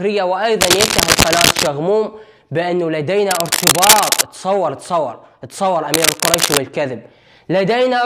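Three bursts of cable scratch noise cut across the sound, from 0.61 to 1.68 s, 3.31 to 4.23 s and 5.94 to 6.59 s. Each is a dense, uneven scratching. The first two sit slightly above the sound, the last about level with it. A worn cable or connector being moved is the likely cause.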